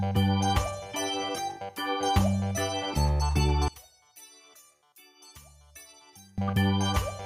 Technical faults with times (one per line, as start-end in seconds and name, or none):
3.68-6.38 one channel inverted